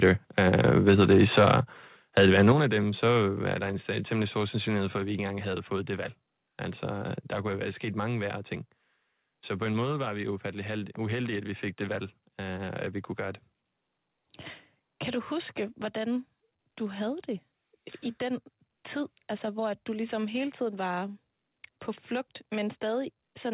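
From 0.02 to 0.1 s, 0.4 to 1.56 s and 2.17 to 2.52 s the peaks are flattened and crackly, about 2 to 3 dB over full scale, likely microphone overload from an input set too high. The level then drops abruptly in three steps, at 2.52 s just before "af dem så" (about 6 dB), at 3.54 s (about 3 dB) and at 4.98 s after "temmelig stor sandsynlighed for" (about 2 dB), likely the microphone volume being stepped down automatically. Throughout, the band stops at 4 kHz, consistent with a G.711 call path.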